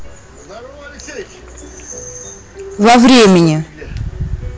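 A stage in the signal chain was driven roughly 22 dB past what it could pass, so from 2.82 s to 3.52 s the speech is hard clipped: every waveform peak is sliced off flat at the ceiling. Those squared-off tops generate a dense spray of high harmonics, and with overload this deep the damage isn't limited to occasional crackle. For that stretch the voice turns into a harsh, buzzing fuzz on every loud syllable.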